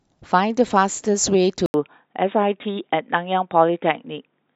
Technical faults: input switched to a poorer device

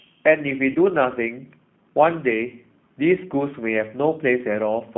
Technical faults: G.729 codec; VoIP packet loss concealed by the speech codec

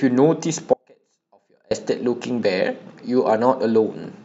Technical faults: audio dropout to a faint residue

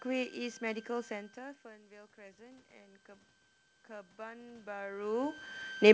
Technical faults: switching supply whistle; automatic gain rising

